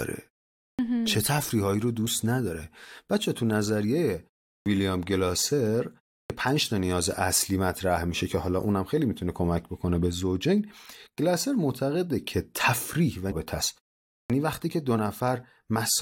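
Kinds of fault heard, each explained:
Clipped start after a pause: at 0.73, 4.6, 6.24 and 14.23 s, speech resumes abruptly after pauses of 0.32 to 0.52 s, each onset missing about 57 to 65 ms because the output device had idled in the silence and was still waking when the sound returned.
Stream segment skipped: at 13.31 s the speech jumps forward with a brief blip, a discontinuity rather than a dropout. The likely cause is one segment of the stream failing to load, with playback carrying straight on from the next segment.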